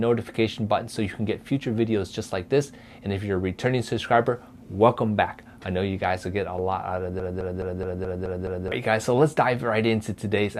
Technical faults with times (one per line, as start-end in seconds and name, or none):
7.20-8.72 broken-record loop